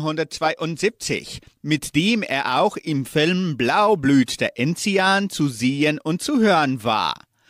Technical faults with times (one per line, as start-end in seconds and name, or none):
none